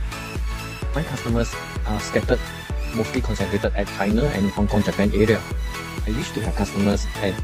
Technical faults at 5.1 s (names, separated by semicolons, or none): none